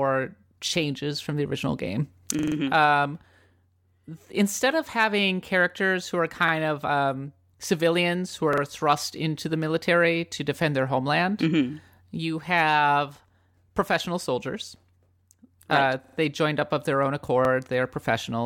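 Repeated-buffer stutters occur at 0.68–0.73 s, 2.39–2.56 s, 6.49–6.53 s, 8.53–8.62 s (between "of um civilians who" and "thrust into the military"), 16.04–16.17 s (before "they joined up of") and 17.45–17.49 s (after "up of their own"). Each time, fresh audio missed its deadline and the device replayed its last block, about 43 ms long, which fits a 2048-sample buffer. The same fragment sounds one to four extra times, with hard joins, as a short stutter. No speech is lost, only delayed.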